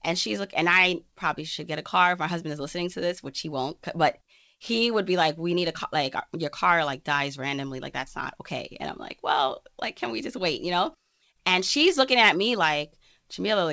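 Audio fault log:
Nothing stood out on listening to this speech, which arrives over a call path with no content above 8 kHz.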